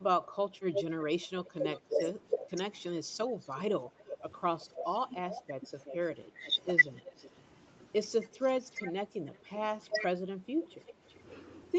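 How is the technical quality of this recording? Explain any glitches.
The recording has two recurring call faults, the first tied to both sides talking at once. The sound carries nothing above 8 kHz, which fits a band-limited call codec.

Speech suppressed in double talk occurs from 0.19 to 6.57 s and again from 8.56 to 10.93 s. The talker's level dips in pieces while the far side speaks. The deepest drops are around 30 dB in the first stretch and 25 dB in the second. About a second and a half is affected early on, and about half a second later. The likely cause is an echo canceller that could not tell local speech from loudspeaker echo, so it turned everything down.

Echo leak appears four times. The first runs from 0.72 to 1.81 s, about 0.35 s late and only about 5 dB below the speech. The second runs from 3.4 to 7.29 s and the third from 8.71 to 10.05 s, both around 0.36 to 0.37 s late and about 15 dB down. 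The last is a faint scrap at 11.1 s, about 35 dB down. Each is a delayed copy of the voice played on the loudspeaker. It likely comes from a speakerphone whose echo canceller let part of the microphone pickup through.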